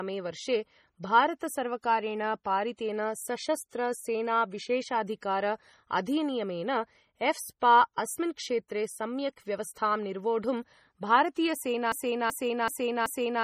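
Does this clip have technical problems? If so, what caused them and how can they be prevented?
Yes. Throughout the speech the sound is watery and swirly, s sounds turn metallic and chirpy, and nothing remains above 15.3 kHz. This is likely heavy MP3 compression, at a bitrate consistent with about 32 kbps, where the encoder discards the treble and switches weak frequency lines on and off between frames. Encoding at a higher bitrate would prevent it.

From 11.92 s to the end, a 0.38 s fragment repeats back to back four times, like a stuck record, and the speech that should follow never arrives. This broken-record loop likely comes from a stalled player, encoder or stream that kept resending its last buffered piece. Adequate buffering with stall detection that mutes the output rather than repeating old audio would prevent it.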